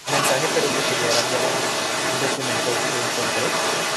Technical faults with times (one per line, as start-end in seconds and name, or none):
0.00-0.07 speech suppressed in double talk
0.00-3.96 other side's voice leaking through